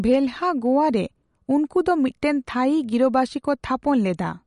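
From start to finish the speech carries plainly audible MP3 compression damage, likely from an encoder starved of bits, which fits a low bitrate around 48 kbps. The treble stops dead at 11.2 kHz, and weak frequency lines blink on and off between blocks, giving a watery, swirling quality, metallic chirps on s sounds and smeared consonant attacks. A spectrogram shows a hard ceiling at 11.2 kHz with patchy, flickering holes in the upper bands.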